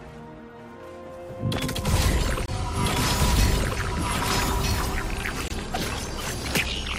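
At 2.46 to 2.48 s and again at 5.48 to 5.50 s there's a gap between chunks: roughly 21 ms of hard-edged silence dropped into the sound every 3 s at the join between chunks.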